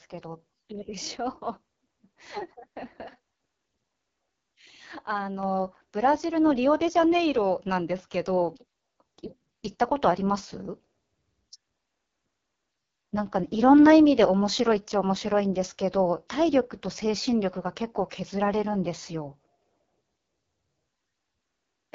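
A speech clip carried through the AMR wideband (HD Voice) codec at heavy damage, with a rough, raspy texture that fits the lowest 6.6 kbit/s mode. On a spectrogram, content stops sharply near 7.5 kHz, and the band above about 6.4 kHz looks like smeared noise rather than harmonic detail. At 5.43 s the microphone volume is stepped up by about 5 dB in a single jump, probably automatic gain control raising the input. Voice and background rise together, and the waveform envelope widens abruptly at that point.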